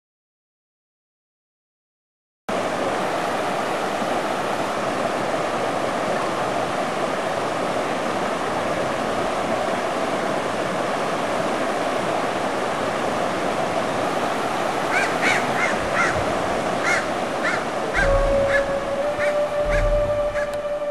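From 14.04 to 15.57 s and again from 19.02 s to the end at 20.90 s, speed rises about 5.9% and pitch about 99 cents, nearly a semitone, snapping back after the first step. This is likely a drift correction step, where clock-matching software briefly resampled to manage its buffer.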